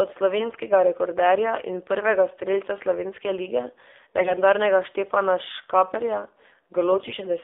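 AMR narrowband mobile codec throughout this speech: everything sits in a 300 Hz to 3.6 kHz band, with a buzzy, synthetic vocal-tract-model quality that fits a low rate near 7.4 kbps. AMR bit errors at 0.38 to 0.61 s, just before "rekorderja in prvega strelca", at 4.18 to 4.38 s, right after "prvega strelca slovenske lige", and at 6.92 to 7.14 s turn the voice hoarse, scratchy and gargly while pitch and level roughly hold. Corrupted, weakly protected frame bits misplace the excitation pulses and skew the finer parameters. The 4.18 s burst has the heaviest error rate, about 7%.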